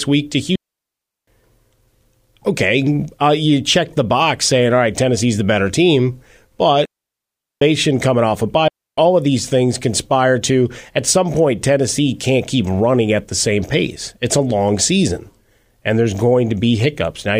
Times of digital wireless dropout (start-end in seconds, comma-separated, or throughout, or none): 0.56-1.27, 6.85-7.62, 8.68-8.98